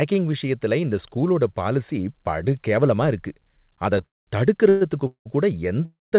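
Four call audio freezes cluster late, at 4.06–4.29, 4.69–4.83, 5.07–5.27 and 5.85–6.14 s. The sound smears into a brief fading buzz, then stalls into silence, except the second, which stays buzzy. The speech resumes where it stopped, nothing lost, likely from a starved jitter buffer.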